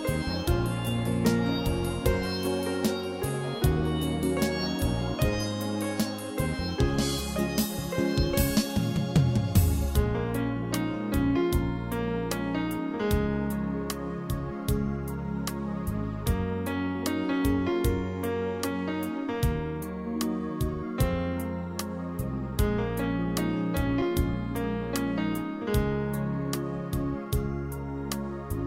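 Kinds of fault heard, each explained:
Underrun with held sample: The output buffer ran dry at about 24.02 s, and the converter kept repeating its last value until data came back. The waveform sits flat for about 4.4 ms. The sound simply halts, with little or no click on entry. No audio is lost during the hold. Playback resumes exactly where it paused, so the restart is only a soft edge rather than a sharp click.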